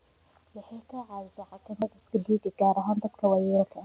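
It's a speech clip over a narrowband call path, and G.711 mu-law fits the way everything above 4 kHz is gone. At 1.82 to 1.84 s there's a skip ahead: about 0.7 s was dropped and playback jumps straight across with no gap. From 1.93 to 3.35 s you get jitter buffer speed-up. The receiver keeps trimming tiny pitch-period slices, around 150 ms in total, to work off the extra delay, so the talking runs about 10% fast at the same pitch and sounds a bit hurried.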